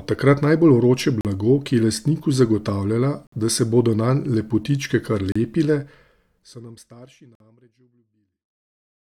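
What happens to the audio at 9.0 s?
At 9.0 s the speech is intact, with the level simply near the end of a smooth editorial fade-out that tapers away cleanly, without any click or hard edge.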